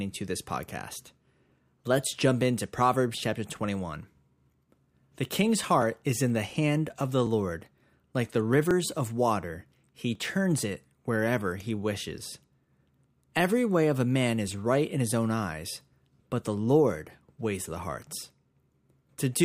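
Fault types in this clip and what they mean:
Clock drift buffer slips: a click repeats every 1.44 s from 1.5 to 18.8 s, likely because two clocks differ by roughly a thousand parts per million, so the buffer periodically drops or repeats several dozen samples, visible as evenly spaced thin vertical lines and waveform discontinuities.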